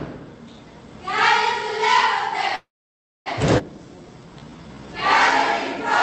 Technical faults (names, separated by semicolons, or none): call audio freeze; skip ahead; jitter buffer slow-down